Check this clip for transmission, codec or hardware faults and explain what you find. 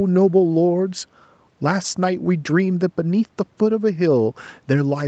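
Nothing wrong turns up here; the speech simply tops out around 8 kHz, which is just the normal bandwidth of the Opus call path it came through.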